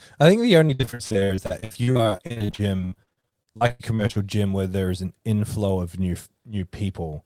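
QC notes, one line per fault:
0.67–4.18 s, repeated packet loss (robotic sound), from after "I think the" until "gym where there is". Dozens of short dropouts, the longest 81 ms. Each hole is filled by extending the preceding sound. About 42% of the stretch is patched, so it sounds choppy and robotic.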